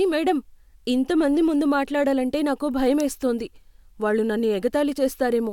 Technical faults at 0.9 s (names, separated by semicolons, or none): none